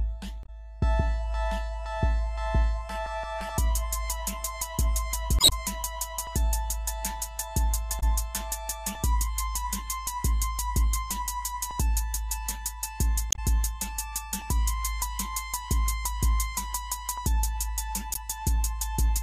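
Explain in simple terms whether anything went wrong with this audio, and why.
Yes, something went wrong: there are five short bursts of damaged data in a compressed stream, at about 0.41 to 0.49 s, 5.36 to 5.53 s, 7.97 to 8.03 s, 13.29 to 13.39 s and 18.13 to 18.17 s. Each is a brief chirp or blip where part of the stored file was corrupted. The player couldn't read those pieces, lost its place, and had to find the next good chunk. At 5.36 s this also adds about 18 ms of extra time.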